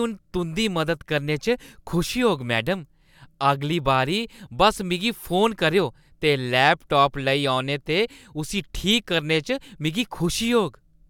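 Nothing technically wrong turns up anywhere in this short bit of speech, so there are no problem spots to point to and no causes to track down.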